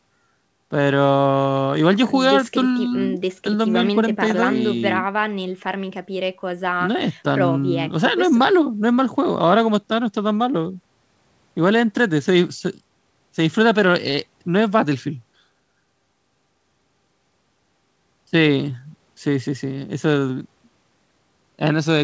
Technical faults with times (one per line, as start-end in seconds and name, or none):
none